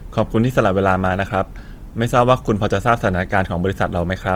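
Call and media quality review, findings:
Grainy, rough texture on sustained speech sounds, plainly audible, throughout the whole clip. Likely cause: Opus compression in CELT music mode, consistent with roughly 24 kbps. Band energies kept but starved bands filled with folded or noise content, so tones turn noisy rather than swirly. Bandwidth stays fullband, with content reaching up to 20.2 kHz.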